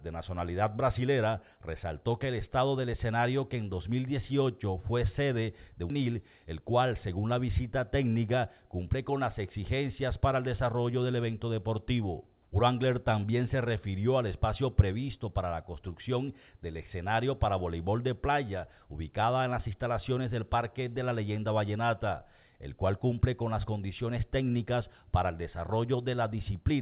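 At 5.90 s there is a skip ahead: about a second of audio is missing, and playback jumps straight to later material with no fill. A stretch of audio was dropped while later audio was already waiting, and the two sides of the cut are joined almost directly.

From 6.49 s to 7.09 s a jitter buffer speed-up follows. The receiver trims its excess delay by cutting short pitch-period-length pieces, removing roughly 70 ms in total. The audio runs at 109% speed with unchanged pitch, which sounds hurried. Throughout, the G.711 mu-law call path leaves nothing above 4 kHz.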